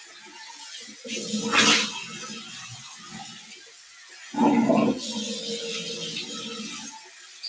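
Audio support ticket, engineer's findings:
Level pumps and flutters throughout; sustained sound and tails ducked, swings of around 15 dB. Noise suppressor applied to music or sounds: a speech-tuned NS is treating steady content and ambience as noise.

Sound cut by the noise suppressor at 0.00–0.53 s, 2.90–3.13 s, 3.33–4.23 s and 7.03–7.43 s. Held and decaying sound sinks about 4–6 dB, deepest at 3.33–4.23 s, while attacks pass. NS gain is clamping non-transient energy.

Call path band-limited, nothing above 8 kHz, consistent with G.722 at 64 kbps.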